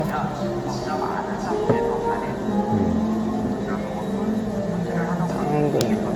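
From start to end the sound carries generation loss: a swirly, smeared texture with a hollow, phasey quality and blurred attacks, well beyond what a single encode at this quality would leave. Nothing is present above 19.3 kHz. The likely cause is repeated lossy re-encoding, around seven passes, each re-quantising on a shifted frame grid so that noise and spectral holes accumulate. The character fits an AAC-LC chain running at roughly 96 to 114 kbit/s.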